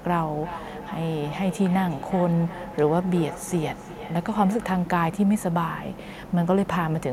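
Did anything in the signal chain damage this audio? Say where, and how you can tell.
Yes: feedback echo between two devices in call processing, 0.43 to 5.03 s. Speech returns about every 0.4 s, thinner each pass, peaking about 15 dB below the direct speech.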